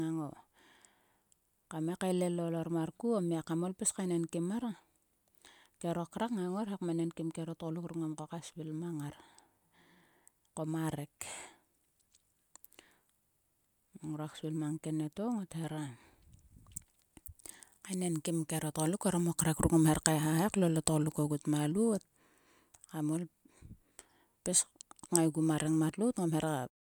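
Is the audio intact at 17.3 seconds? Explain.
Yes, the speech at 17.3 seconds plays through intact, with no dropout, click or distortion at that moment.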